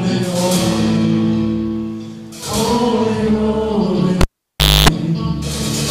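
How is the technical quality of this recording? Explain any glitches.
One glitch is audible. Cable pulled and plugged in, 4.21 to 4.89 s: a live lead is disconnected and reinserted, giving a pop, 0.63 s of near silence, 0.27 s of 50 Hz mains buzz, then another pop.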